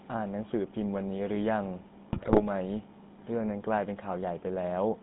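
GSM full-rate codec, throughout: the speech is rebuilt from a vocal-tract filter driven by sparse regular pulses, giving a buzzy, gravelly sound confined to 150 Hz–3.7 kHz.

GSM bit errors, 2.12 to 2.42 s: flipped bits corrupt the decoder's filter, pitch and gain values, so the speech breaks into squawks, pops and gargling.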